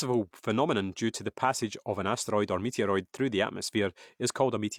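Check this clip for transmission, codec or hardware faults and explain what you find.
Nothing wrong turns up anywhere in this recording.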